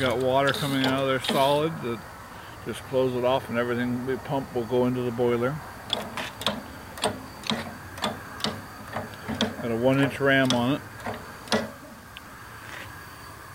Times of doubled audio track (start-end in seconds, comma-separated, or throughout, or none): none